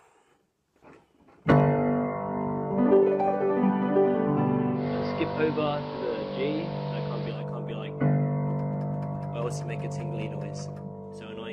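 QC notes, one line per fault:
4.73–7.45 s, digital radio blending to analogue: 180 ms cross-fade to AM; spectrogram loses its top end and shows a hiss floor; waveform level shifts about 2 dB.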